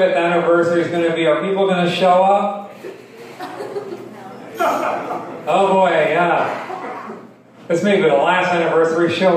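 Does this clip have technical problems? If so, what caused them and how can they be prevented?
No, no technical faults here.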